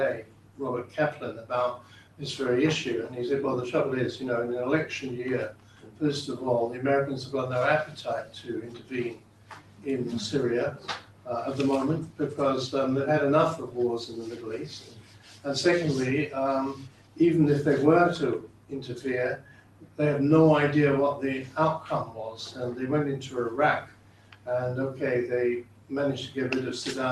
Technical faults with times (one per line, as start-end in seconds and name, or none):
0.00-27.12 noise suppressor applied to music or sounds
0.20-2.22 sound cut by the noise suppressor
5.50-12.20 sound cut by the noise suppressor
13.63-15.46 sound cut by the noise suppressor
16.74-17.20 sound cut by the noise suppressor
18.39-19.99 sound cut by the noise suppressor
21.43-24.47 sound cut by the noise suppressor
25.62-26.37 sound cut by the noise suppressor